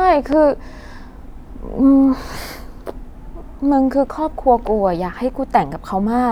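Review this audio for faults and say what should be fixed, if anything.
There's one loud pop near the start, from 0.33 to 0.35 s: a single sharp click that peaks about 10 dB above the speech, with the talking carrying on straight through underneath it. What you're hearing is a sudden voltage jump getting added to the signal, and the downstream circuitry shapes it into that brief thump. The likely culprit is a cable being plugged in, a switch being flipped, or a static discharge right as recording began. To prevent it, get all connections and switches settled before hitting record and keep the input muted until the chain has powered up.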